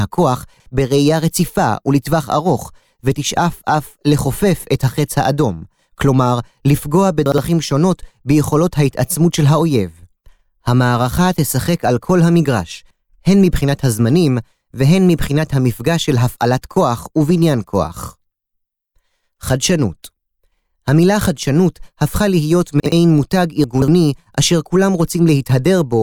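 Chunks out of order occur at 0.54–0.66 s, 7.26–7.38 s and 22.8–22.92 s, where one 60 ms chunk of speech arrives a chunk late and plays after its successor. At 23.64–23.88 s, a chunk three places late scrambles 0.24 s. Each jumble sounds like a brief stutter. On a waveform, three hard joins show as abrupt steps. On a spectrogram, they appear as thin vertical broadband lines where the formant tracks jump backward.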